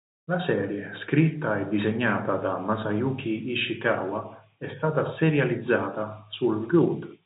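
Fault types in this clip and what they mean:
Nothing in this speech clip stands out as a fault, so there's nothing to list here.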